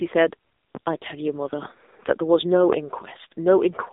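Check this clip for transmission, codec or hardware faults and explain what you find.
One fault runs through the whole clip: AMR narrowband mobile codec coding. The speech sits in a band from about 250 Hz to 3.7 kHz, and nothing is heard above 3.8 kHz. The codec models the vocal tract and drives it with a few pulses per 5 ms subframe. With too few bits, the excitation is crude, so the speech sounds buzzy and synthetic. The damage is heavy, which fits a low mode near 6.7 kbps.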